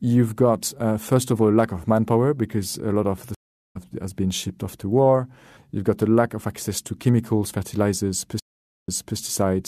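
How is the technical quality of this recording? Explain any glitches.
The speech is interrupted twice by stream reconnects. At 3.35 s the audio drops out for about 0.41 s and resumes roughly 0.4 s further on, so a short stretch is skipped. At 8.40 s it goes silent for about 0.48 s and picks up 0.30 s earlier, repeating a moment already heard. Each time, the connection broke and the player restarted its decoder mid-stream.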